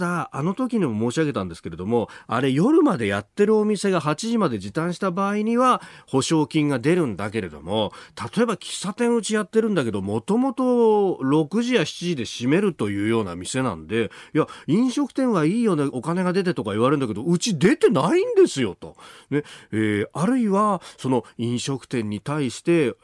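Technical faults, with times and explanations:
Nothing in the speech stood out as a technical problem on listening.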